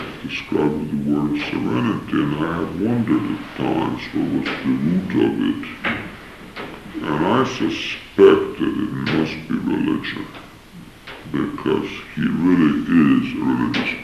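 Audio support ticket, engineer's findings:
Wrong sample rate, entire clip: sound slowed to 0.667x and pitched down 7.02 semitones, consistent with 48 kHz material played at 32 kHz, no resampling. Spectrogram: all content compressed downward to two-thirds of its original frequency. Waveform: features stretched 1.5x in time.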